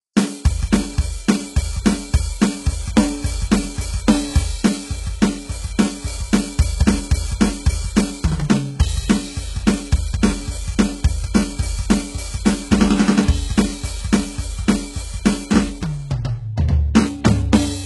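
From start to finish the music has its top end stopping at about 11.5 kHz, and the upper register sounds synthetic rather than recorded: the treble is gritty and metallic, and treble harmonics sit loosely against the midrange. This is likely HE-AAC compression at a very low rate, consistent with roughly 12 kbps. The treble is regenerated by copying lower bands upward under a coarse envelope, and the damage is heavy.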